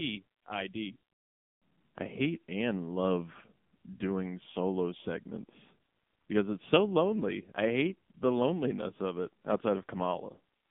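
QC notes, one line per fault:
Throughout: AMR narrowband mobile codec. Speech is confined to about 150 Hz to 3.6 kHz, with nothing above 3.7 kHz. Heavy coding damage, consistent with a low 6.7 kbps mode, leaves it buzzy and synthetic.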